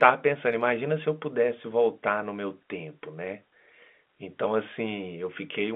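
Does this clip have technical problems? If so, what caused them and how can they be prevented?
No, nothing here sounds like a technical problem; it's just ordinary G.711 telephone coding doing its normal job, holding the speech to the usual phone band of roughly 200 Hz to 3.5 kHz, so there's nothing to trace back or prevent.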